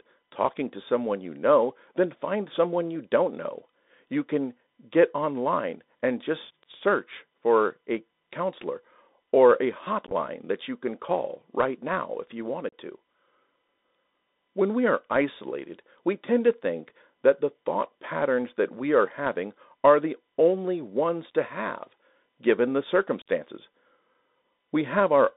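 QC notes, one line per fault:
Throughout: Bluetooth CVSD headset codec. The speech is confined to roughly 250 Hz to 3.7 kHz, with nothing above. CVSD sends one up-or-down bit per sample at 64 kbps and adapts its step size, so loud high-frequency energy outruns the step and distorts, s sounds come out scratchy, and a granular hiss sits under the speech. The damage is plainly audible.
10.07–10.13 s, 12.69–12.73 s, 23.22–23.28 s: unconcealed Bluetooth headset packet loss. Each event drops about 34–41 ms of audio, which fits around ten lost packets that were replaced by silence or an idle pattern rather than patched over. The first follows "a counselor or a" and precedes "that you can call". Its gaps are scattered over about 53 ms, with the longest at 15 ms, so it sounds chopped and crackly. The others follow "right now if you" and "to have given the". The holes have abrupt edges, and the level dips briefly on recovery.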